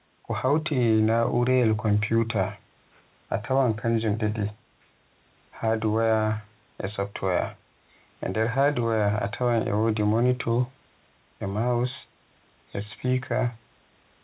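No technical faults are audible in this speech.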